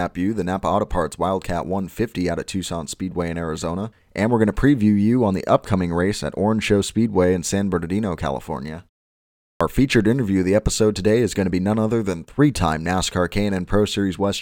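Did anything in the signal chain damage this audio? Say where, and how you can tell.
Yes: clipped start after a pause, at playback. Following 0.75 s of silence, sound enters abruptly at 9.56 to 9.61 s, losing 45 ms while the sleeping output device wakes.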